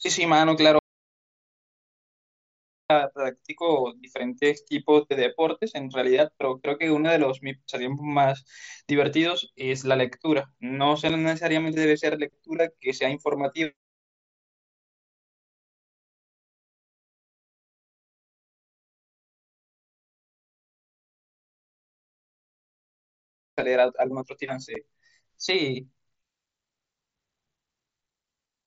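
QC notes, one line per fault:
0.79–2.90 s, audio dropout to silence: the speech cuts off abruptly and returns about 2.1 s later, with total silence and no room tone in between. This is likely a lost input with silence written in its place. On the waveform it appears as a flat line, and on the spectrogram as a fully black block.
11.09 s and 24.75 s, unconcealed Bluetooth headset packet loss: each is a 7.5 ms hole where a single headset voice packet was dropped and nothing filled the gap, leaving a tiny abrupt break in the speech. Each shows as a hairline gap in the waveform and a thin vertical black slit across the spectrogram, which otherwise tops out at the 8 kHz edge of the mSBC link.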